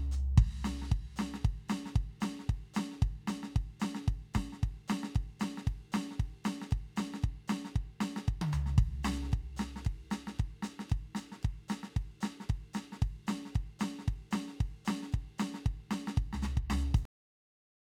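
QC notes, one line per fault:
17.05–17.95 s, cut-off end: the music stops abruptly at 17.05 s, mid-sound, and the remaining 0.9 s is digital silence. There is no decay or release tail; the signal goes from full content straight to silence. This is what happens when the final buffers of a recording or render are never written out, so the output ends wherever the last completed buffer happened to stop rather than where the music itself finishes.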